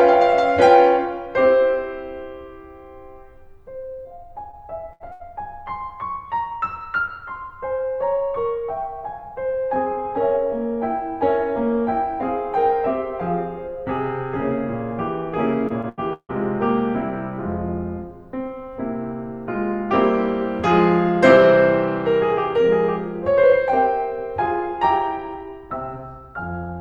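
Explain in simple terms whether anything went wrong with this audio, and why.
Several parts of this music drop out, and the player patches over them.

At 4.03 to 4.07 s and again at 4.51 to 4.55 s there is short concealed packet loss. About 20 ms of music never arrived in time. The player stretched the last sound to cover it, leaving a quick smear or wobble.

At 4.93 to 5.02 s and 5.12 to 5.22 s there is a burst of packet loss. About 80 ms goes missing each time. The last sound is held and fades, then the music jumps ahead. The part in between is gone.

From 15.68 to 16.31 s there is repeated packet loss, which gives a robotic sound. Four gaps come close together, the longest about 154 ms. Nearly half that stretch is patched-in sound, so the music turns choppy.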